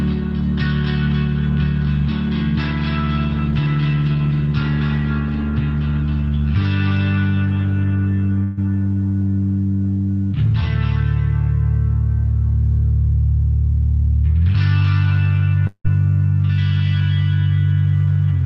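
At 8.43 s there's a burst of packet loss running to 8.59 s. Several packets in a row never made it in time, so the receiver stretched the last bit of audio for about 140 ms, fading it as a held buzz or hiss. Playback then jumps ahead, with roughly 140 ms gone.

Around 15.67 to 15.86 s things cut out again, likely a long network dropout. The last sound is carried on and faded over a gap of about 170 ms, the last 80 ms or so of it fully quiet, before audio picks up further along, with about 180 ms of material lost.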